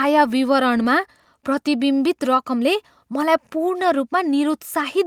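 No technical faults can be heard at any point in the speech, so there is nothing to describe in time order.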